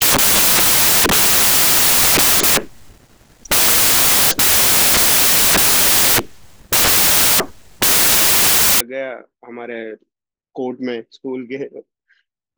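From 0.00 to 8.81 s the speech is buried under samples built from the wrong bytes: misassembled sample bytes push the fast-changing low bits into the high positions, giving loud, harsh broadband noise, close to white on loud sounds. A spectrogram shows flat broadband fill; the waveform looks dense.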